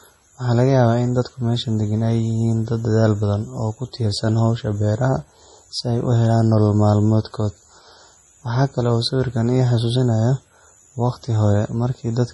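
The speech was most likely pushed through a heavily starved MP3 encoder, and the damage fits a bitrate of around 32 kbps. Short of bits, the encoder has cut the treble flat, so nothing survives above 11.5 kHz, and it keeps dropping weak frequency lines that blink on and off between frames. Across the whole clip this gives a watery, swirling texture, with metallic chirping on s sounds and blurred, smeared consonant onsets, all consistent with MP3 compression.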